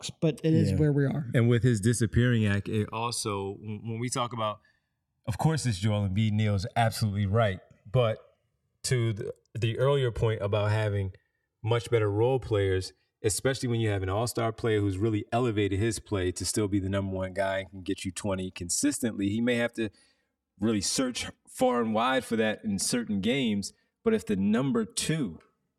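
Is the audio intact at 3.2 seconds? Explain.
No. At 3.2 s the speech is affected by channels drifting apart, present for the whole clip. The two sides run on clocks differing by roughly 150 ppm, so their offset grows toward about 5 ms. In mono, comb notches sweep slowly, giving a gradual flanging.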